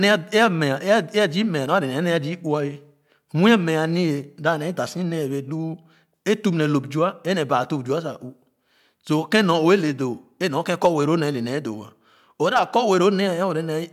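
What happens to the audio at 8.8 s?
Nothing goes wrong at 8.8 s: the speech carries on intact through that moment, with no dropout, click, distortion or other fault to be heard.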